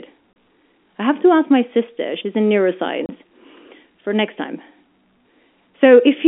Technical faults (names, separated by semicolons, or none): packet loss filled with silence